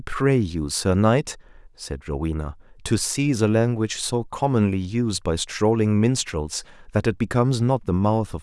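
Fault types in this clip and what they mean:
No faults detected in this speech recording.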